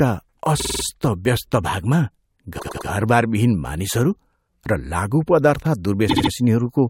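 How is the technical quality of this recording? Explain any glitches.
The speech stutters three times from repeated frames: a 48 ms block replays five extra times at 0.59 to 0.83 s, a 96 ms block three times at 2.58 to 2.87 s, and a 72 ms block three times at 6.09 to 6.30 s. Compressed frames were written more than once, suggesting runs of two, four and three frames, and each run adds about a quarter second.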